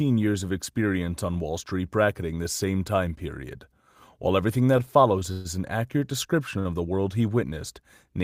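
Between 4.77 and 5.47 s the speech drags and stutters, catching four times, with the longest hold lasting 129 ms. These are repeated stalls (stutter): packets arrived late, the jitter buffer kept emptying, and the receiver extended the last sound for 155 ms in all, about 22% of that stretch, with nothing lost.

At 6.59 s a sound is briefly held too long, about 62 ms, before the speech resumes where it left off. This is a short stall from a late packet: its delay jumped by 62 ms, so the buffer ran dry and the receiver stretched the preceding sound until it arrived.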